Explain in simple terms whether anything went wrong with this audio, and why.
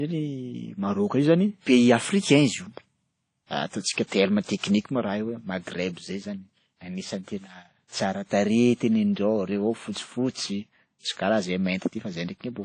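Yes, something went wrong. The whole speech clip carries damage from lossy compression, most likely WMA compression. This kind of codec chops the sound into blocks and throws away detail it judges unimportant. Here the loss is plain to hear. Nothing remains above about 10.1 kHz, so the speech sounds dull. There is also a washy, ringing quality and a hiss that rises and falls with the voice.

There is pre-echo at three points: 4.07 s, 4.58 s and 8.77 s. Each time, a sudden sharp sound arrives late in one of those blocks. The codec's noise then spreads backwards into the quiet just before it. You hear a brief hiss leading in, lasting about 47, 53 and 37 milliseconds. The sharp sound itself comes out softened and smeared rather than crisp.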